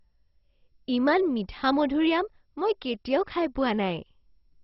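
This is a speech clip with heavy MP2 compression throughout. Nothing is heard above about 5.6 kHz, so the sound is dull and boxy. A gurgling, granular roughness runs through the speech. Upper bands drop in and out, giving a watery flicker. The likely cause is MPEG Layer II coding at a very low bitrate, fitting roughly 32 kbps. Starved of bits, the encoder shuts off its top sub-bands and coarsely quantises the rest.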